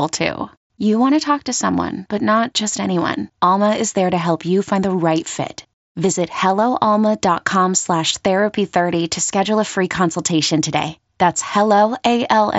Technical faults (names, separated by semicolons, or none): none